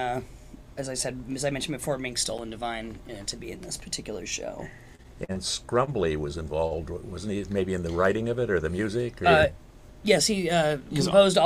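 The audio has two very short ticks or dips from a block of digital silence, at 2.38 s (8 ms) and at 3.31 s (under 3 ms, which fits a 128-sample block). In each, zeros briefly replaced the sound, either because the output buffer wasn't filled in time or because a calculation produced invalid values. From 4.95 to 5.38 s the sound turns choppy, with pieces missing. This is repeated packet loss (robotic sound): four gaps, the longest 40 ms, about 80 ms in all, patched by extending the preceding sound, which makes up about 27% of that stretch. At 5.85 s and again at 6.67 s a sound is held too long, by 22 ms and 37 ms respectively. These are short stalls from a late packet: the jitter buffer ran dry, the last sound was stretched until the packet arrived, and playback then resumed where it left off, with nothing lost.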